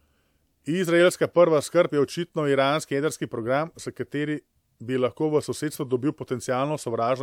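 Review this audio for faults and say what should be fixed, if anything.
No audible faults; nothing to fix.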